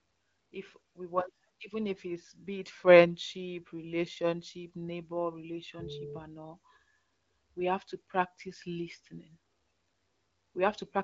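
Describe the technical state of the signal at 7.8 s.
At 7.8 s the speech is intact, with nothing wrong at that moment beyond the AMR wideband (HD Voice) coding it passes through, which keeps the sound clear and leaves no content above about 7.1 kHz.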